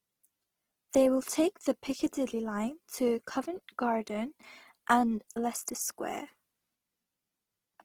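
Throughout, the speech sounds grainy and rough, with tones turned noisy despite highs reaching 20.3 kHz. That's likely Opus compression, fitting about 16 kbps.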